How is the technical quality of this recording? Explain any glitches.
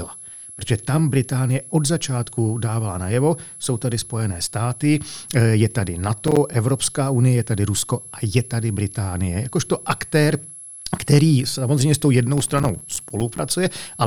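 The recording has two technical problems: a steady high whistle under the whole speech clip and two bursts of crackle.

A switching supply whistle runs throughout, a narrow tone between about 10.9 and 11.0 kHz, roughly 20 dB below the speech. A switching power supply cycling in an audible burst mode puts this whine into the audio path, and its pitch wanders slightly within that band.

Processor overload crackle occurs from 6.28 to 6.54 s, just before "unie je tady", and again from 12.38 to 13.39 s, right after "který samozřejmě s tou". The processor missed successive buffer deadlines, a handful in the first burst and a few dozen in the second. The gap pattern points to buffers of roughly 5 ms. Each miss drops in silence with hard edges, heard as a gritty tearing over the speech.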